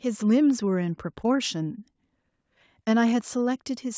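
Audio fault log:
No faults are present in this speech. It has passed through a call's microphone processing, which rolls off the lowest bass and leaves nothing above 8 kHz.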